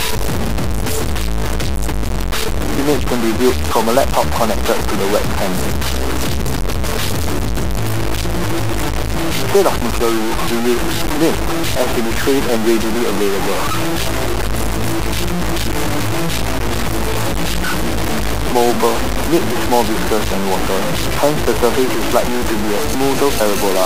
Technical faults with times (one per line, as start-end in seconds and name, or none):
0.00-23.86 low bit depth without dither